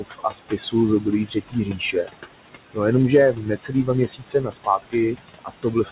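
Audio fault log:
throughout noise suppressor artifacts: The suppressor treats steady bands as noise and pulls them down by about 19 dB, frame by frame. The room noise, which sits about 10 dB below the speech, sinks in the gaps and rises under the words.
0.0–0.74 s, 1.26–2.1 s, 3.33–3.89 s, 4.07–4.95 s, 5.14–5.92 s speech cut by the noise suppressor: The suppressor mistakes parts of the speech for noise and cuts them with the background, by about 20, 19, 16, 21 and 21 dB at worst. Roughly 0.5, 0.4, 0.4 and 0.5 s of the first four spans sound swallowed and faint.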